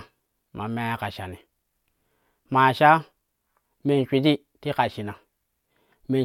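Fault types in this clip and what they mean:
Nothing stood out on listening to the speech in this clip.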